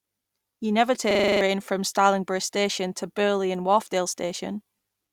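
Speech, with a system hang loop from 1.11 to 1.41 s: a single 42.67 ms slice of audio repeats seven times, giving a rattling stutter at about 23.4 Hz. That is the sound of the system freezing while the audio hardware kept replaying its ring buffer, and the loop length fits a 2048-sample buffer. About a third of a second of real speech is lost. On a waveform, identical blocks tile end to end. A spectrogram shows one frozen pattern repeating at evenly spaced vertical seams.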